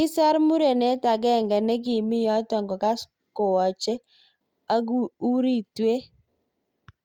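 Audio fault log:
No audible faults detected.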